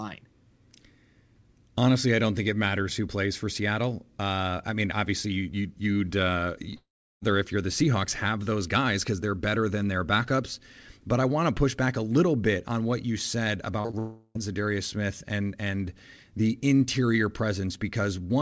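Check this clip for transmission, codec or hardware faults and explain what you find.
Yes, there are network faults here: two long dropouts and a quick burst of concealed packet loss, all riding on a call path whose audio stops at 8 kHz, which fits G.722 at 64 kbps.

Long network dropout, 6.76 to 7.23 s and 13.99 to 14.37 s: After "you'd uh", the receiver stretches the last sound into a fading buzz, then about 0.37 s of dead silence before "if you're the". The second gap, about 0.36 s, is filled throughout with no silence. Both are likely stalled delivery.

Short concealed packet loss, 13.81 to 13.95 s: Right after "on what you said", three back-to-back holes of 20 to 40 ms get patched by extrapolating the last sound, so you hear a brief smeary wobble leading straight into the second dropout.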